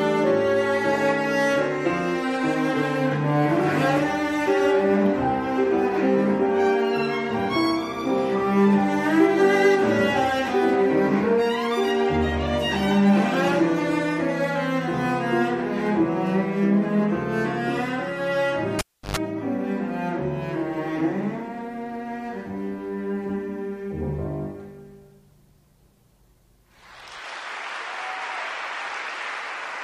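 A cable pulled and plugged in occurs from 18.79 to 19.17 s: a pop cuts the sound to near silence for about 327 ms. While the plug's tip alone makes contact, 50 Hz mains buzz bursts through for about 107 ms. A second pop marks the sound's return.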